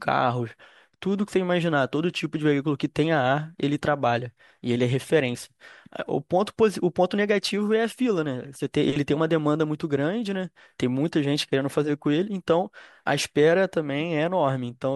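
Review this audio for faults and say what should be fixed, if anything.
No faults found; nothing to fix.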